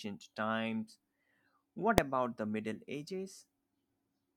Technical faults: invalid numbers at full scale

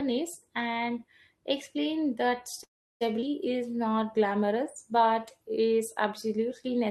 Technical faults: call audio freeze; skip ahead; jitter buffer slow-down

